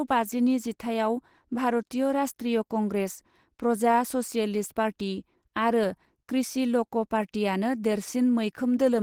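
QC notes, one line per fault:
Throughout, Opus compression: likely a starved Opus hybrid-mode encode, around 16 kbps, so the speech turns plainly hoarse and grainy while still reaching 20 kHz.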